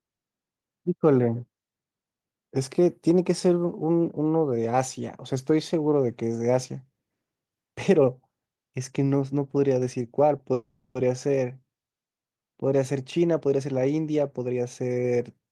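At 10.53 s the speech hangs in a call audio freeze: the last sound stretches into a fading buzz for 0.42 s, likely because delayed packets emptied the jitter buffer. It then resumes exactly where it stopped, unlike a dropout.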